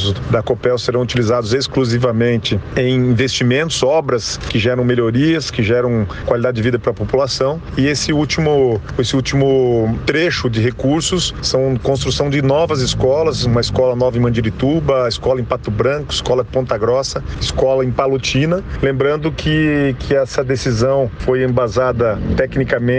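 Nothing in this audio stands out as a technical problem; it just runs along the whole way without any glitch to point to.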